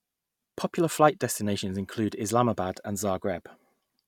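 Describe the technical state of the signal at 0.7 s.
At 0.7 s the speech signal is intact, with no audible fault at that moment.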